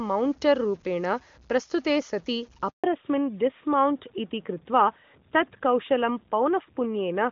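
Throughout, quiet passages turn grainy and gritty, with distortion that tracks the speech about 30 dB down, likely from low bit depth without dither, consistent with 8-bit truncation. From 2.70 to 2.84 s the voice drops into 140 ms of silence: a handover gap, where no speech frames arrived while the call switched networks. From 2.84 s to the end, the clear HD Voice sound, AMR-WB at 23.85 kbit/s, gives way to a duller, rougher tone with nothing above 4 kHz. This is a fallback to narrowband, to AMR-NB at 12.2 kbit/s.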